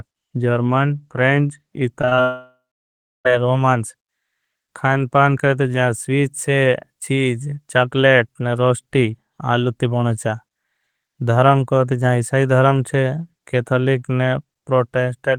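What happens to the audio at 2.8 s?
At 2.8 s the speech has stopped. From 2.21 s the last sound is drawn out into a fading buzz that gives way to about 0.68 s of silence before speech resumes at 3.27 s, with roughly a second of it simply gone. This is likely a long network dropout: the audio stream stalled, the receiver stretched the final fragment to cover the gap, and once that ran out it played nothing until data arrived again.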